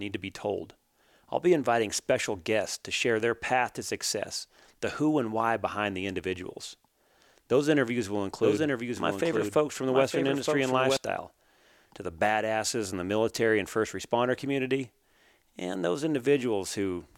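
From 8.43 s to 10.97 s, just after "interviews will", a doubled audio track appears: a second, somewhat quieter full-band copy of the speech runs about a second behind, dry and without decay, switching in and out abruptly. It is likely a duplicate capture path or a misaligned edit.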